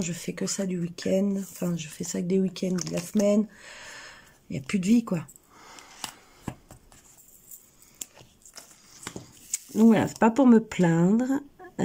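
At 8.19 to 8.23 s the sound jumps forward abruptly, with a brief blip marking the join rather than a stretch of silence. The likely cause is a stream segment skipped: one chunk of the segmented stream failed to load, so the player moved straight on to the next and the material in between never played. A dropout leaves a hole and then resumes where it stopped. Here there is no hole, and the audio carries on from further ahead.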